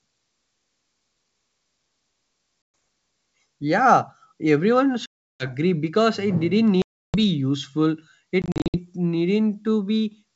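Packet loss on an ADPCM call hits at 2.62 s (120 ms), 5.06 s (340 ms), 6.82 s (320 ms) and 8.42 s (scattered bits), each cutting to dead silence before speech returns slightly distorted while the decoder resyncs.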